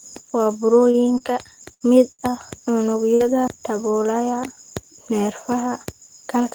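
At 0.91 s and 1.18 s, short stalls from late packets hold the sound for 25 ms and 19 ms while the jitter buffer runs dry, then resume with nothing lost. Each appears as a brief flat, smeared stretch of repeated harmonics on the spectrogram.

At 1.74 s, a burst of packet loss drops 60 ms of audio. The concealment fills 64 ms by continuing the last sound and fading it down, which shows as a tapering waveform followed by an abrupt jump.

Further stalls follow at 1.98 s (16 ms) and 2.12 s, where the held sound stretches to 70 ms.

A second burst of packet loss at 3.15 s again skips 60 ms, with a 51 ms fading fill before the audio jumps ahead.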